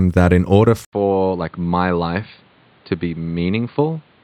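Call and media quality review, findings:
Input switched to a poorer device at 0.85 s, to end: 80 ms gap, then nothing above 4.7 kHz, level down about 5 dB, new noise floor; likely capture-device change.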